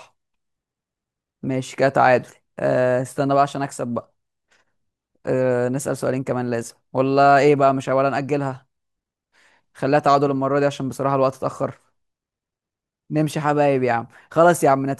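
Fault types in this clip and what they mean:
Nothing to flag here: I listened for trouble and didn't hear any.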